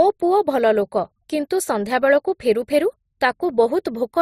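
Throughout the speech, two kinds of coding damage sound together: the swirly, smeared texture of a low-rate MP3 beneath the grainier Opus sound, likely transcoding between lossy codecs. A spectrogram shows a flat ceiling with nothing above 15.8 kHz, and blotchy, broken high-frequency detail.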